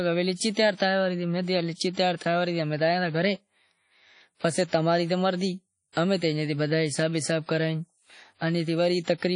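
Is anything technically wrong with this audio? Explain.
Yes. Throughout the speech there is a washy, ringing quality, with nothing above 10.1 kHz. This is likely WMA compression at a low bitrate near 32 kbps. Long transform blocks smear quantisation noise, so hiss breathes with the signal. A plain low-pass filter wouldn't cause that.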